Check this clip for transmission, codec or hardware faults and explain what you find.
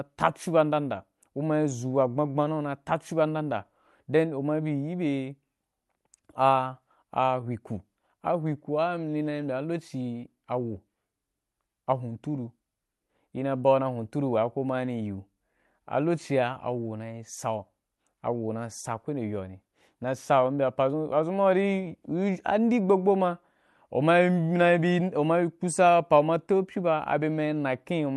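Nothing in the signal points to a fault, and the speech stays continuous and intact throughout the recording.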